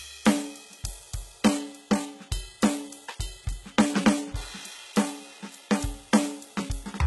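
HE-AAC compression runs throughout the music, and the heavy damage fits a very low bitrate around 16 kbps. The treble is likely rebuilt by spectral band replication from copied lower bands, so its harmonics fail to line up, sounding gritty and metallic, with nothing above 11.8 kHz.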